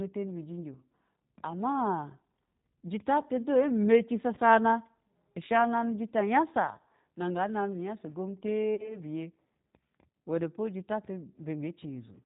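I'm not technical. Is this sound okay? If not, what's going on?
No. The whole recording went through the G.729 codec, a phone-call format that squeezes speech into very little data by rebuilding the voice from a rough model of the throat and a handful of pulses, and dropping everything above 4 kHz. You can plainly hear the result: the speech is clear enough to follow, but it sounds muffled, slightly rough and a bit artificial, like an old internet call.

There is also VoIP packet loss concealed by the speech codec, at 4.35 to 4.39 seconds and again at 8.75 to 8.97 seconds. Small chunks of the call went missing in transit, one at the first spot and two in a row at the second. The receiving end filled each gap by guessing from the last bit of voice it had, which comes out as a brief buzzy or smeared sound that fades. At the second, longer spot the voice stays weak and distorted for a moment even after the audio returns.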